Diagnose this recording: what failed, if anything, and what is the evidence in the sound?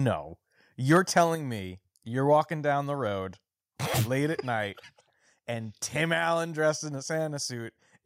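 From 0.91 to 1.22 s the loudest syllables pick up a harsh, crackly edge, with peaks pushing about 3 dB past full scale and under one percent of samples flattened. That's microphone overload at the converter, likely from input gain set too high.

At 1.35 s, just after that distorted stretch, voice and background drop together by about 4 dB in a single step. That's the microphone volume being stepped down, likely the call processing reacting to the clipping by lowering the device's input level.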